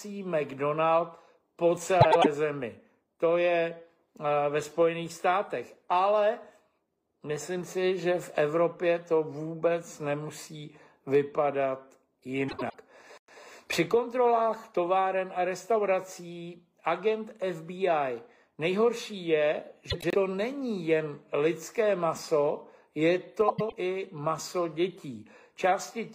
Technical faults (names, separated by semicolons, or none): frames out of order